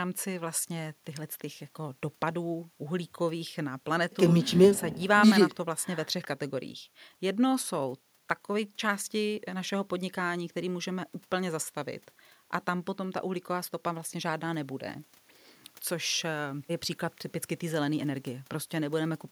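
Nothing technically wrong turns up anywhere in this speech recording.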